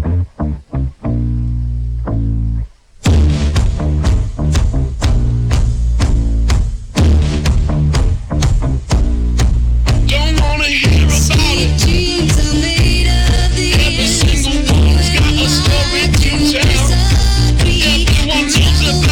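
Nothing is technically wrong with the clip at any point.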